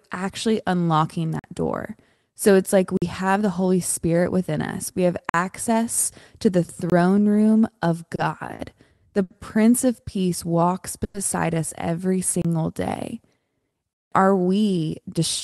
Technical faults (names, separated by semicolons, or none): block of digital silence; short stall from a late packet; jitter buffer slow-down; call audio freeze; jitter buffer speed-up